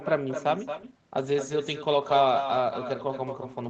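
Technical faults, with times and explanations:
Throughout: echo with no canceller. The speech returns about 9 dB quieter roughly a fifth of a second later, as a thin shadow of every phrase.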